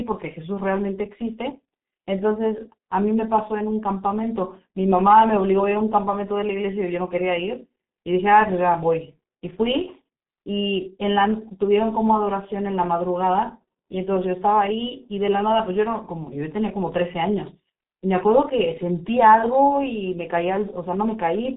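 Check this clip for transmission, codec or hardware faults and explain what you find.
One codec fault runs through the whole recording. The G.723.1 codec is present from start to finish. Packing speech into 30 ms frames at what sounds like roughly 6 kbit/s, its slow-updating voice model leaves the speech hoarse with smeared consonants. Nothing passes above 3.8 kHz, over a 200 Hz to 3.6 kHz line band. Heavy coding roughness, beyond the plain muffling of a clean narrowband line, marks it as this codec.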